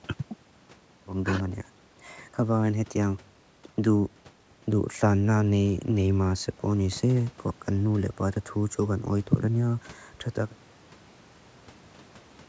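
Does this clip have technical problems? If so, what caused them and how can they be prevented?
No, this clip has no technical problems, so there is nothing to prevent.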